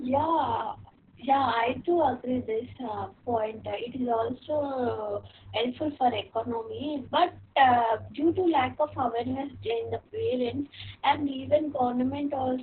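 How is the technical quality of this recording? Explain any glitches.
Quality's poor. Opus voice compression squeezes the whole clip hard. Nothing gets through above about 4.4 kHz, so the speech sounds boxed-in and muffled, like an old phone line. That narrowband cut, plus the coarse SILK coding of the excitation, makes the voice hoarse and a little robotic. The damage is heavy and constant, which fits a bitrate down around 6 kbps with long frames of about 60 ms.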